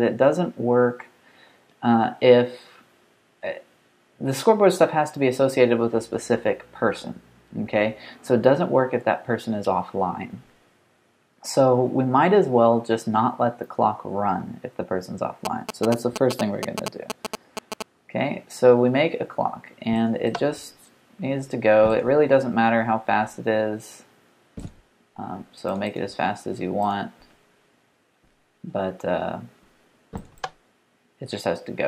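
GSM signalling bursts, 15.45 to 17.82 s: a nearby 2G phone's radio pulses, rectified by the audio circuitry, give a galloping 217 Hz ticking buzz.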